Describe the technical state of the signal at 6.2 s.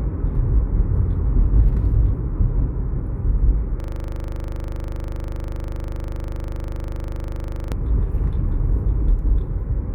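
At 6.2 s the signal is in a system hang loop (3.80–7.72 s): a frozen driver leaves the sound hardware replaying one 40 ms buffer, producing a rigid 25 Hz buzzing stutter.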